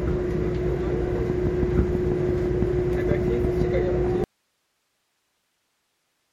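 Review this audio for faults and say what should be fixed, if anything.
A train of clicks runs from 1.3 s to 3.62 s. Something is injecting a short pulse into the signal path at a steady 6 per second, most likely interference from nearby equipment or a faulty connection or power supply. The result is about fifteen evenly spaced, near-identical ticks sitting well above the sound, peaking roughly 10 dB over it. They are audible as a regular popping throughout that stretch. To prevent it, reroute or shield cabling away from other gear and check connections and the power supply.

An audio dropout to a faint residue begins abruptly at 4.24 s and lasts to the end of the clip. The wanted signal stops reaching the recording, likely through a break in the input connection or source, while the chain after that point stays live. The sound is cut off mid-flow rather than fading, and what remains is only hiss, roughly 50 dB below the earlier level. 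To prevent it, secure connectors and monitor input levels during capture so a lost signal is caught immediately.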